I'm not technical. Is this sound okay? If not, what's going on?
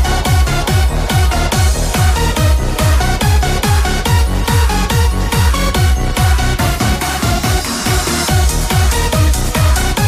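Yes, this sound is okay, and there's nothing going on that needs fixing.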